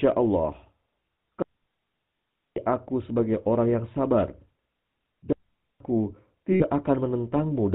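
A speech recording carries plainly audible GSM full-rate codec damage from start to finish: a buzzy, gravelly roughness from the pulse-driven vocal-tract model, which fits the 13 kbps full-rate mode. On a spectrogram, energy stops sharply at 4 kHz, and the harmonics look smeared and grainy. Two digital wireless dropouts cut the audio, one from 1.42 to 2.57 s (about 1.14 s) and one from 5.33 to 5.80 s (about 0.48 s). In each, the receiver lost too much data and muted with a very short fade. The waveform shows a flat hole of near silence, with no noise burst on either side. From 6.52 to 6.63 s, lost GSM frames leave a brief rough, metallic ring where the last good frame's settings were repeated. This 0.08 s gap fits about four lost 20 ms frames and appears on a spectrogram as a frozen, blurred spectral band.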